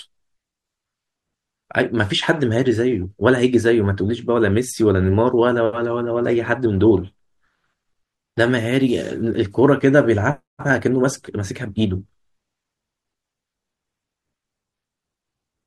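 A speech recording with no technical fault to report. Nothing wrong can be heard at any point, so there are no times or causes to give.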